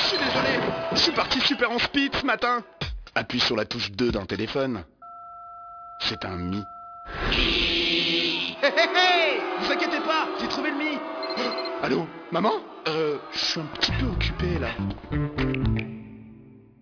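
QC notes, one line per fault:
Throughout, aliasing: the audio was brought down in sample rate without an anti-alias filter first, which fits a conversion to 11 kHz. Content above the 5.5 kHz fold point reflects back below it as spurious tones unrelated to the real pitches, sitting around 10 dB under the wanted signal. On a spectrogram, energy runs hard up to the 5.5 kHz band edge with mirrored, downward-sloping traces where rising components should be.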